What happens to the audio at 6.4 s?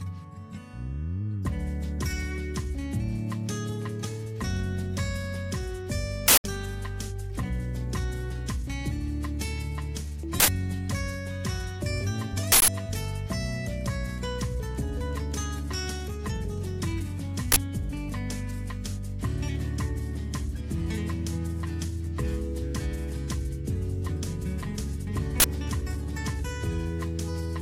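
An uninitialised buffer plays from 6.28 to 6.44 s: a 160 ms block of leftover memory bursts out as loud digital noise, unlike a dropout's silence.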